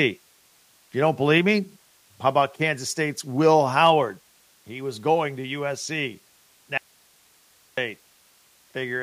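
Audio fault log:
1.38 s: microphone volume stepped down. The speech level drops suddenly by about 3 dB in a single step, likely because the call software judged the input too hot and cut the device's input volume at once, so voice and background fall together.
3.84 to 3.90 s: microphone overload. The loudest peaks run about 2 dB past the converter's ceiling, likely from an input volume set too high, and roughly one percent of samples are flattened, giving those syllables a harsh, crackling edge.
6.78 to 7.77 s: audio dropout to a faint residue. The speech vanishes abruptly for about 1.0 s while the path stays live, likely a loss of the wanted signal upstream, leaving only hiss some 35 dB below normal level before the sound returns.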